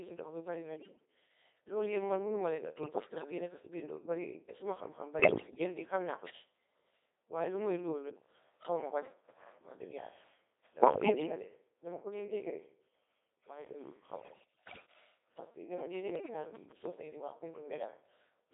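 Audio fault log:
Throughout, Codec 2 vocoder: the speech sounds robotic and buzzy because only pitch, voicing, level and a rough spectral envelope survive at 2.4 kbit/s, and the decoder rebuilds everything from sine waves, so the original waveform is gone. Damage is heavy and the band sits at 300 Hz to 3.7 kHz.
0.77 to 1.05 s, 2.84 to 3.32 s, 5.20 to 5.64 s, 10.82 to 11.32 s, 14.14 to 14.86 s and 16.16 to 16.34 s, bit errors on digital voice radio: corrupted bits land in a low-rate vocoder where each one steers pitch, level, voicing or spectrum for a whole frame. The result is sudden pitch and level jumps, odd tone colour, bleeps and warbling gibberish. Landmarks: right after "mi bari na", between "mënuma leen a" and "yi nekka si biir", and just before "di xam naa ko". The first burst is the roughest, with around one bit in ten flipped. The others are milder, at roughly 4 to 7 percent.
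15.80 to 16.87 s, train of clicks: about seven similar pops at a steady pace of roughly 6.6 per second, peaking around 5 dB above the audio and ticking through pauses as well. Likely interference from nearby gear or a faulty connection or power supply, and it overlaps the last error burst.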